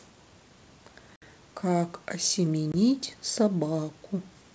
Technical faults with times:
1.16-1.23 packet loss on an ADPCM call
2.72-2.74 packet loss on an ADPCM call

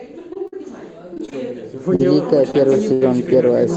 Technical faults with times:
0.33-0.37 short concealed packet loss
0.47-0.54 burst of packet loss
1.14-1.35 repeated packet loss (robotic sound)
1.95-2.01 short concealed packet loss
2.51-2.55 short concealed packet loss
2.93-3.03 burst of packet loss

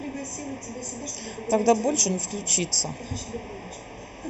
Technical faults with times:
0.00-4.29 channel delay (comb filtering)

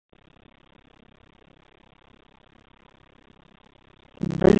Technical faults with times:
0.00-4.59 AMR narrowband mobile codec
0.00-4.59 block size mismatch (padded)

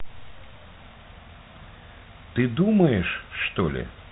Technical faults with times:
none

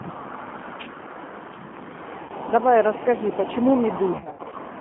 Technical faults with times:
0.00-4.81 G.729 codec
2.23-2.32 VoIP packet loss concealed by the speech codec
4.13-4.57 VoIP packet loss concealed by the speech codec

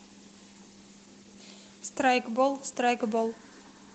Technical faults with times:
none

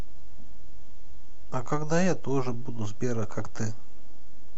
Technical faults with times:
0.00-4.57 DC offset

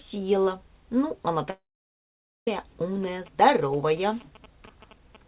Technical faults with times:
1.50-2.48 long network dropout
3.03-5.28 GSM signalling bursts

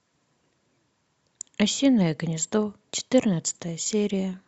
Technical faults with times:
none

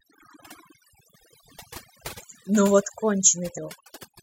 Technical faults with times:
0.00-4.23 overdone noise removal

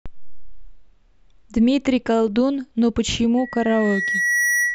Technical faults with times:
3.37-4.74 loudspeaker feedback squeal

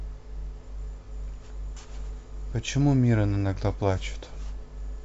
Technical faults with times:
0.00-5.04 mains hum

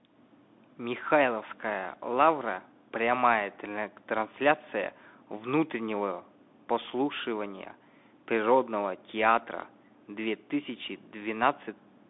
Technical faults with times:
0.00-12.10 Bluetooth CVSD headset codec

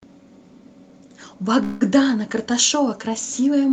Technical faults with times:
1.63-1.83 call audio freeze

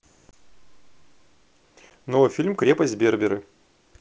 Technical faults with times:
0.31-0.35 packet loss on an ADPCM call
1.90 packet loss on an ADPCM call

